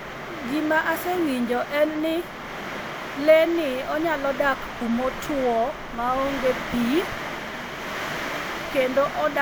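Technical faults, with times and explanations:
No technical faults are audible anywhere in this speech.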